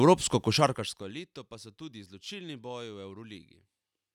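From 0.51 s to 1.20 s the speech is turned down by about 20 dB with zipper noise. The gain drops in unsmoothed 2 dB jumps, roughly ten a second, instead of gliding, and each jump leaves a small tick. The result is a quick zipping that rides on the speech until just before "pa so tudi izločilni". On a waveform the envelope forms a staircase. A spectrogram shows thin vertical broadband lines at each step.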